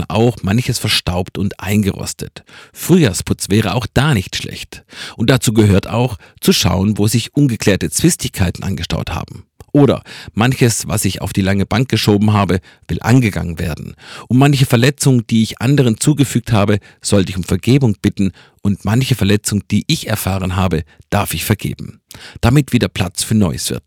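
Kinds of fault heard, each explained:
Hard clipping: the level is pushed about 6 dB past what the chain can pass, so peaks get sheared flat, though only a small fraction of samples, well under one percent, actually hit the ceiling. The flattened tops throw off high harmonics, heard as crackle on the loudest moments throughout.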